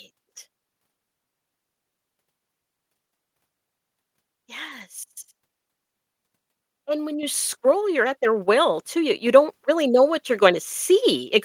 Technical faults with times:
7.23 microphone volume stepped up

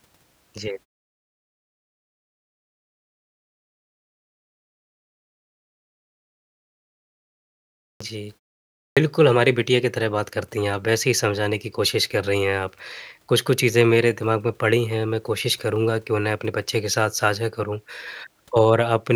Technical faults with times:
7.91-8.00 clipped start after a pause
8.88-8.97 clipped start after a pause

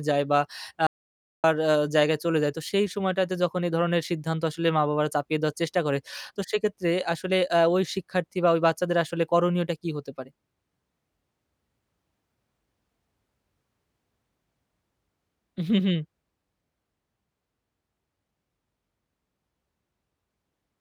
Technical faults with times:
0.87-1.44 audio dropout to silence

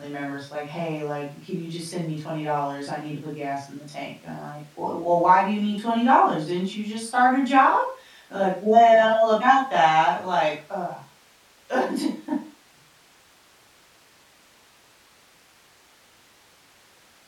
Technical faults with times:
none

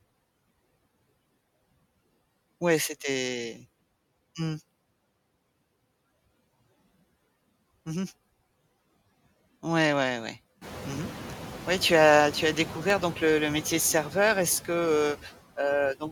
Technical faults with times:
0.00-16.11 noise suppressor artifacts
12.90-13.16 CD scratch ticks

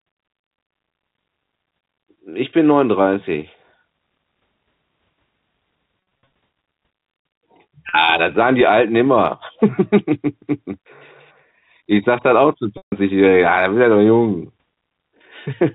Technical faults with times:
6.25 packet loss with pitch repetition
7.89-7.93 packet loss with pitch repetition
12.77-12.92 packet loss with pitch repetition

